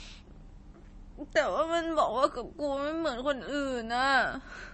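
MP3 compression damage runs through the whole of this short speech recording: nothing survives above about 8.3 kHz, and the remaining sound has a watery, swirling quality that is plainly audible. That points to a starved encoder, likely at a low bitrate around 32 kbps, which cuts the treble at a fixed frequency and discards weak frequency lines that flicker on and off between frames, leaving s sounds dull and attacks smeared.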